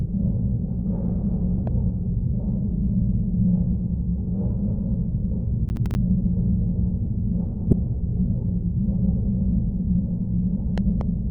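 A recording of everyday sound, with a loud pop from 1.67 to 1.69 s, a few dB above the signal, and a double loud pop between 10.78 and 11.03 s, roughly 10 dB up, likely from a plug, switch or static discharge. From 5.69 to 5.95 s there is processor overload crackle: around five short dropouts to silence give a gritty tearing, which fits missed deadlines on buffers of roughly 10 ms. A corrupt frame decoded at 7.70 to 7.73 s produces a brief glitch, with energy misplaced in frequency across about one damaged frame.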